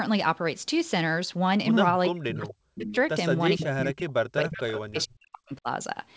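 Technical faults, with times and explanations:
2.09–2.92 s and 3.57–5.68 s, speech suppressed in double talk: the echo canceller likely mistook this side's talking for loudspeaker echo while the far end was playing, so it pulled the voice down by about 40 dB, leaving dips and dropouts over roughly 0.7 s and then about 2 s.
2.48–2.52 s, 2.75–2.96 s, 3.61–3.66 s, 4.53–4.80 s and 4.97–5.05 s, echo leak: the loudspeaker side's canceller likely let part of its microphone pickup through, so short scraps of the played voice return about 450 to 460 ms late, at roughly 10 to 20 dB below the speech.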